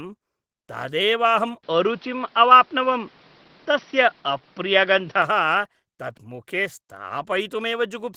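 From the start, Opus voice compression in hybrid mode leaves plainly audible hoarse, slightly robotic coding damage, consistent with roughly 16 kbps, though the band still reaches about 20.3 kHz.

From 1.63 to 5.22 s the sound turns dull and boxy, cut off above 5.9 kHz, with new noise about 35 dB down and a level shift of a few dB, likely the input switched to a poorer device, without any gap.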